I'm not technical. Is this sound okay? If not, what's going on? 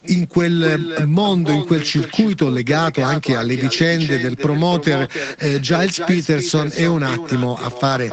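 No. Throughout, there is an echo with no canceller: the far end's loudspeaker feeds its microphone, so every phrase returns about a third of a second later, quieter and hollow.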